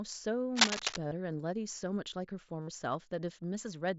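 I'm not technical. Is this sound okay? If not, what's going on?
No. From about 0.55 to 0.98 s there is a rough scratching, rustling noise over the speech, louder than the speech itself. This is cable scratch noise, likely from a worn cable, plug or control being moved. When its metal contacts shift, the connection flickers between good and bad, and each flicker adds a burst of crackle.

There are also two brief buzzy spots, one at about 1.08 to 1.12 s (38 ms) and a longer one at about 2.62 to 2.68 s (60 ms). Each sounds like a steady, slightly metallic tone held at full loudness, with a small wobble as normal speech returns. This is concealed Bluetooth headset packet loss. Bits of audio travelling wirelessly between headset and phone went missing, and the phone filled each gap by repeating a snippet of the sound just before it, which produces that held, buzzing tone.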